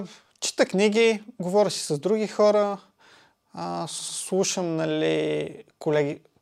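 From 3.98 to 4.18 s the speech stutters from repeated frames: a 96 ms block of the compressed stream is decoded and played twice more in a row, which fits a run of three compressed frames, adding 192 ms to the clip's running time. Unlike an echo or reverb tail, which overlaps and decays, each repeat is an exact, full-level copy laid end to end, so the sound jumps back rhythmically instead of smearing.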